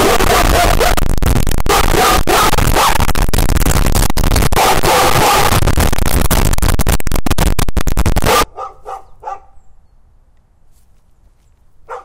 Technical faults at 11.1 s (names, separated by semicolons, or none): none